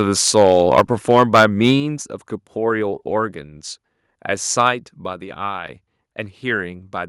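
Microphone overload runs from 0.01 to 0.82 s. The peaks are flattened, a harsh, crackling edge on the loudest syllables, about 7 dB beyond the converter's limit with a small share of samples cut off. The likely cause is a microphone input volume set too high for the converter. At 0.8 s the microphone volume steps down by about 3 dB. Sound and background both drop suddenly, most likely because the call software reacted to the distorted peaks by lowering the input gain.

The microphone overload returns from 1.09 to 1.71 s. It is again about 7 dB over, with roughly twice as many samples clipped. This is likely still the input volume driving the converter past its limit. At 1.8 s the microphone volume steps down again, a sharper drop of about 6 dB, likely a second automatic gain cut after the renewed clipping. At 5.13 s a further step down of about 3 dB follows, with no distortion just before it. 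The likely cause is the same gain control lowering the microphone once more.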